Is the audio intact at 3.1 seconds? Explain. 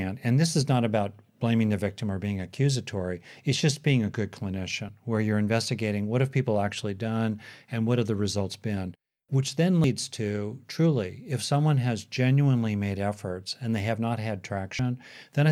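Yes, the speech at 3.1 seconds is intact, with no audible fault at that moment.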